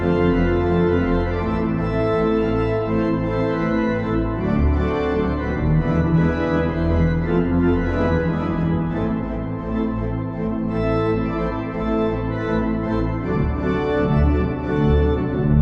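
Throughout the clip the sound is dull and gurgling, with a granular roughness, most likely MP2 compression starved of bits, which fits a rate around 80 kbps. Upper sub-bands drop out and flicker, showing on a spectrogram as a ragged, blocky ceiling with patches blinking on and off.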